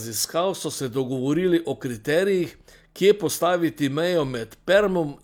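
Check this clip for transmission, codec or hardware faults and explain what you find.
No transmission, codec or hardware faults are audible here.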